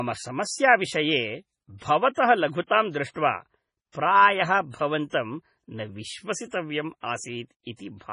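A speech recording with heavy MP3 compression damage throughout: nothing above 10.5 kHz and a watery, swirly texture, likely from encoding at a very low bitrate around 24 kbps. Pre-echo appears from 5.09 to 5.13 s as a 35 ms hiss smearing ahead of a sharp attack, where block-wide quantisation noise spills into the quiet moment before it.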